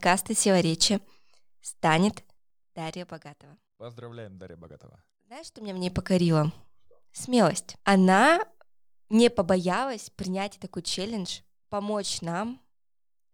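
Zipper noise runs through the speech at 2.05–3.58 s (down about 25 dB), 5.46–6.02 s (up about 25 dB) and 9.52–9.86 s before "принять такой челлендж помочь". The gain jumps in unsmoothed 2 dB steps, each clicking, so a ticking rides the fade.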